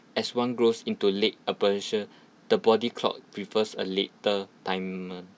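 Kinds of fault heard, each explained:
No technical fault can be heard anywhere in the speech, with the signal remaining steady, continuous and undistorted throughout.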